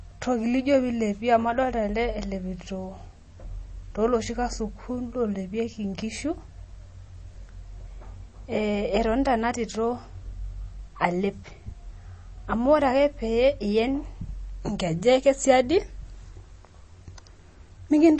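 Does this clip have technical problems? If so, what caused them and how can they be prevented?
Yes. Throughout the speech the audio carries MP3 compression damage, likely from a heavily starved encode that fits a bitrate around 32 kbps. Nothing survives above 8.3 kHz, and weak frequency lines drop in and out between frames, leaving a plainly audible watery, swirling texture. A simple low-pass filter would only dull the top; this churning below the cutoff is what marks it as codec damage. Encoding at a much higher bitrate, or keeping the uncompressed original, prevents it.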